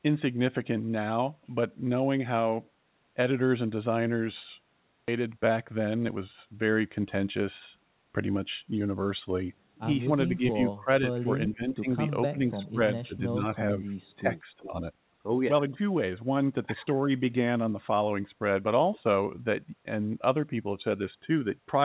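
At 5.08 s the audio makes a skip ahead: around 0.4 s is missing, and the two sides are butted together with no fill. The sound jumps forward abruptly. On a waveform this appears as an abrupt discontinuity in the envelope with no silent gap. A spectrogram shows one vertical seam where the formant patterns fail to line up, as the receiver discarded queued audio to shed excess delay.

Immediately after, from 5.20 s to 6.63 s, comes a jitter buffer speed-up. Playback runs at 109% while pitch stays unchanged, because the receiver repeatedly cut out short pitch-period-sized pieces, roughly a seventh of a second in total, to shrink an overfull buffer. The talker sounds slightly rushed. On a spectrogram the harmonics keep their spacing but the syllables are compressed in time. A waveform shows pitch cycles spliced cleanly with no visible gaps.

Between 10.29 s and 14.83 s the talker's level repeatedly collapses: 10.29–11.28 s, 11.52–11.88 s, 12.31–12.81 s, 13.03–13.22 s, 13.79–13.87 s and 14.16–14.83 s. 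The dips range from slight to deep, the strongest cutting the level by roughly 25 dB. This is likely speech suppressed in double talk, where an echo canceller attenuated the near talker while both sides spoke. A waveform shows the envelope pinched in ragged bites, and a spectrogram shows the energy fading or being chopped into fragments.

Within the last dip, from 14.58 s to 14.68 s, a faint copy of earlier sound returns about 0.41 s late and about 20 dB below the main level. This is likely an echo leak from a loudspeaker path that the canceller failed to fully remove. A spectrogram shows a weak, smeared repeat of earlier formant shapes offset in time. Throughout, nothing appears above 4 kHz, consistent with the narrowband G.711 call codec.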